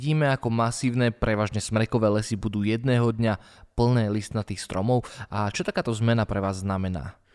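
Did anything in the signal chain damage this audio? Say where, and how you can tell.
No, nothing in the signal chain has audibly damaged this speech recording, and every stage from capture to playback appears to have passed it on intact.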